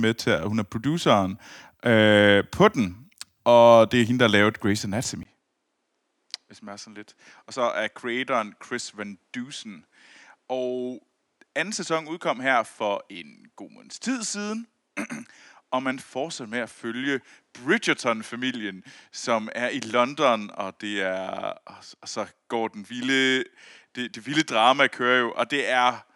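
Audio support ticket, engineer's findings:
Input likely switched to a poorer device at 5.23 s; capture path changes mid-recording. Brief dropout of about 20 ms at the switch. From there to the end, speech band-limited to nothing above 11.4 kHz, so duller and less airy. Level down roughly 10 dB. Different background noise appears, sitting far below the speech. The tonal shift points to a second microphone or headset path with its own response.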